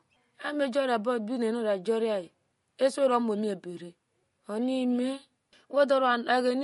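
MP3 compression runs through the whole speech clip, from start to finish. There is nothing above 11.2 kHz, a hard ceiling on the treble, and the coding damage is plainly audible throughout. That damage is likely from MP3 encoding at a low bitrate, around 48 kbps. Short of bits, the encoder drops the top band at a fixed point and discards the quieter frequency detail it judges unimportant, so the speech loses its airy top and the missing detail is clearly audible.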